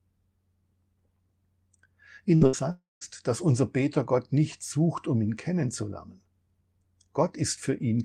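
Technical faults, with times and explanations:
2.35–2.44 s and 2.47–2.56 s, burst of packet loss: about 60 ms lost each time, concealed by the last sound held and fading. The spectrogram shows the last sound smeared flat, then an abrupt jump.
2.71–3.04 s, long network dropout: sound stretches into a decaying buzz or hiss, then about 0.17 s of near-silence, likely from lost packets. The waveform shows a tapering envelope, then a flat gap.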